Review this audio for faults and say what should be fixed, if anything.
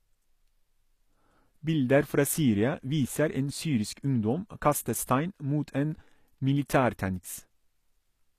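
Throughout the speech, s sounds turn gritty and lispy, and nothing is heard above 15 kHz. This is likely HE-AAC compression rebuilding treble from copied lower bands, which fits about 24 kbps. Prevent it by encoding at a higher bitrate, or with plain AAC or a lossless format.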